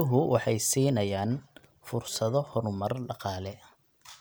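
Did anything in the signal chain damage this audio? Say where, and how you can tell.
Yes. Chunks out of order at about 1.58 s: a brief jumbled moment in the speech, over in well under a fifth of a second. The damage is at the driver or buffer stage. One block of audio, about 5.8 ms long, was delivered two blocks late, so it plays after material that should follow it. Nothing is missing, but the reshuffle leaves three hard joins where the waveform jumps.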